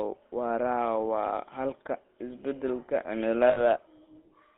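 Throughout, the speech carries the buzzy, gravelly grain of the GSM full-rate codec, with a bitrate that points to 13 kbps and a band from 250 Hz to 3.7 kHz. Its coarse pulse excitation sounds unlike the watery swirl of modern low-rate codecs.

From 3.50 to 3.60 s, right after "xalka isbedelka", lost GSM frames leave a rough, metallic ring as the decoder repeats its last good settings. That fits about three missing frames. The sound is held rather than cutting out as a gap would.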